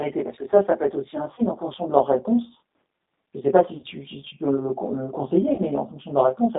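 Throughout, channel delay (comb filtering): one channel lags by roughly 20 ms before the mono sum, cutting closely spaced notches from about 20 Hz upward, so the speech sounds rough or slightly doubled. The G.729 codec is audible throughout, with the line held to 200 Hz to 3.7 kHz and a rough, synthetic texture that fits an 8 kbit/s G.729A stream. VoIP packet loss concealed by the speech codec occurs at 1.35–1.43 s, 3.77–3.85 s and 5.55–5.62 s. The decoder extrapolates over 30, 60 and 30 ms gaps, consistent with one, two and one lost packets, giving a buzzy, fading smear that stays weak briefly afterward.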